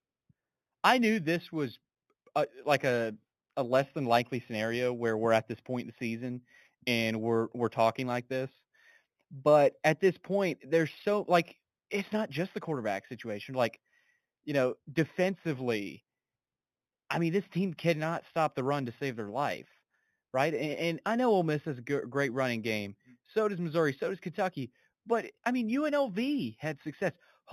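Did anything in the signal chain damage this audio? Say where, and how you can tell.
Yes. Throughout the speech, sibilants carry a faint metallic shimmer and the top of the band sounds dulled, with mirrored energy between 4 and 8 kHz about 25 dB down. This is imaging from linear upsampling at the sample-rate conversion stage, which fits an 8 kHz source interpolated with straight lines.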